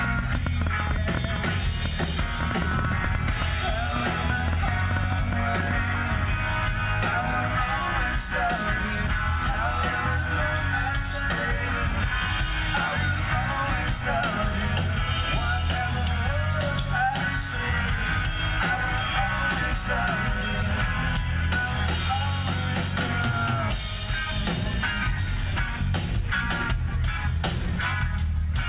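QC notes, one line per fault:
0.04–5.72 s, train of clicks: about 40 pops, unevenly spaced at 7.6 per second, roughly 15 dB over the sound, likely interference; vertical spectrogram stripes, waveform spikes.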